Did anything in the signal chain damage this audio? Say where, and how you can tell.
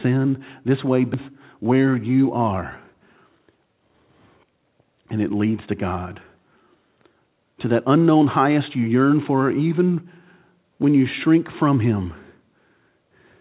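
Yes. At the jitter buffer, a skip ahead: at 1.14 to 1.16 s the receiver dropped a stretch of speech while later packets were already queued, cutting about 0.7 s of delay in one step. Nothing fills the hole, so the speech on either side is butted together almost directly. You hear a sudden forward jump, with material missing and no pause. It happened at the buffer or on the network, not at capture.

Also in the buffer, a jitter buffer speed-up from 2.86 to 4.65 s. With more audio queued than its target, the receiver repeatedly trimmed short pitch-period pieces, about a third of a second in all, to drain the backlog. Speech runs at 118% speed with unchanged pitch, so it sounds rushed rather than higher. The 4 kHz band limit, which points to a G.711 call codec, stays constant throughout, so both faults lie in the network or buffering stage.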